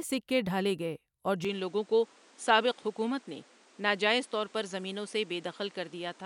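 At 1.45 s, right after "سکے ڈھالے گئے اور", the speech abruptly loses its top end: nothing above about 10.5 kHz remains through to the end, and a new background noise appears roughly 30 dB below the voice. There is no gap at the change and the level barely shifts. The likely cause is the input switching to a poorer device. The arrival of a different noise floor and tone, not just a duller sound, distinguishes it from a simple filter or codec bandwidth drop.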